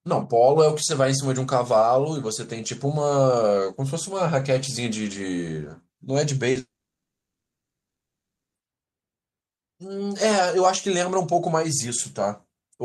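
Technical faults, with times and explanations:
6.51 to 6.57 s, short concealed packet loss: about 40 ms of audio arrived too late, so the receiver stretched the last sound over the gap, leaving a brief smear.
6.59 to 8.57 s, long network dropout: roughly two seconds never arrived, likely a network outage; the filled-in sound fades fast, then about 1.85 s of near-silence before audio resumes.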